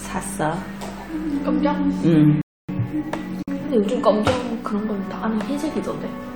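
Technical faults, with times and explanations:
2.42 to 2.69 s, playback stall: The sound cuts out mid-flow and leaves about 0.27 s of dead silence, then resumes. That clean halt-and-continue points to the player itself, not the recording. The likely cause is that the playback buffer ran dry or the audio thread was briefly blocked, so no samples reached the output until the stream recovered and picked up again.
3.43 to 3.48 s, gap at a join of encoded pieces: A short hole of about 51 ms opens in otherwise continuous sound, its edges smeared, and the audio then carries on from the point where it stopped. This is the mark of separately encoded segments spliced without trimming. Each encoder run leaves a little leading delay and pads its final frame, and that untrimmed padding plays out as silence at the seam, which fits pieces about 10 s long.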